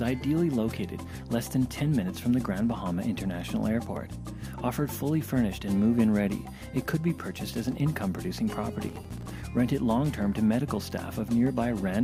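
Processor overload crackle from 8.81 to 9.40 s: dozens of buffers of a few milliseconds each miss their deadline, leaving hard-edged silent gaps heard as gritty crackle.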